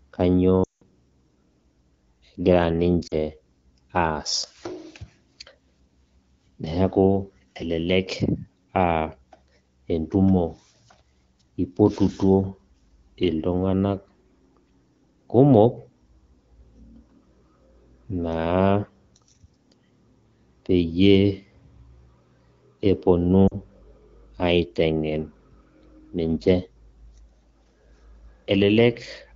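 Lost AMR speech frames at 0.63–0.83 s, 3.07–3.14 s and 23.47–23.56 s: corrupted frames made the AMR-WB decoder repeat its last good pitch and vocal-tract settings at falling gain. The first, about 180 ms, drops to near silence within two frames before the speech returns; the 40 ms gaps give brief dips.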